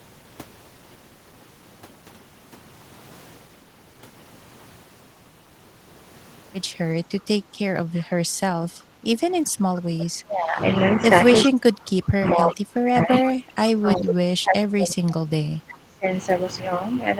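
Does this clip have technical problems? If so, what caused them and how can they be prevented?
Yes. Three kinds of echo-canceller fault are audible in this speech recording.

Background gated by the echo canceller: from 7.41 to 7.52 s the room tone sinks by about 7 dB for roughly a tenth of a second, then returns. The canceller clamped the microphone while the loudspeaker was active. Unlike double-talk suppression, only the background ambience drops, not the talker. Gentler suppression with a comfort-noise fill would keep the room sound steady.

Echo leak: a delayed copy of the far-end speech, trailing the original by 379 ms, surfaces briefly at 7.99–8.03 s, where it is barely audible, and again at 11.44–11.49 s, where it is much stronger, roughly 15 dB under the main speech. This is likely residual loudspeaker sound the canceller failed to remove. What separates it from the other two faults is that something is added rather than taken away. 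Headsets or better acoustic isolation between speaker and microphone would prevent it.

Speech suppressed in double talk: the talker's own voice is pushed down while the other side is also speaking. This happens from 10.24 to 11.11 s, with a drop of around 20 dB, and again from 11.44 to 16.06 s, where it reaches about 30 dB and lasts close to five seconds. The likely cause is the canceller mistaking simultaneous speech for echo. Unlike gating, the voice itself fades or breaks up, not just the ambience. A canceller with proper double-talk detection, or a headset, avoids this.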